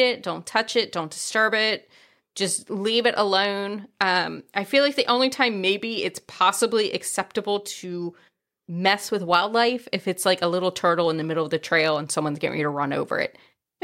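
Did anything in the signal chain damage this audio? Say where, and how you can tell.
No, nothing along the chain seems to have harmed this speech recording, so there's no damaged stage to point to.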